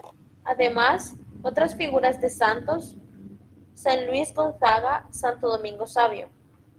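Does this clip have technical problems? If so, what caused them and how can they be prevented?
Yes. Overlap-add ripple runs through the whole clip: frames were rejoined with overlapping windows that don't sum to constant gain, so the level pulses by about 6 dB at around 200 Hz, a metallic buzz. Prevention: use a window and hop size whose overlaps sum to a constant, such as Hann at 50% overlap.

A lost packet rebuilt from error correction appears at 2.45–2.47 s, and two more at 4.63–4.69 s. The decoder replaced missing audio with low-bitrate redundant copies, giving 20 ms and then 40 ms of rougher, noisier sound without a gap. Prevention: reduce packet loss on the network path, for example with wired links or less congested routing.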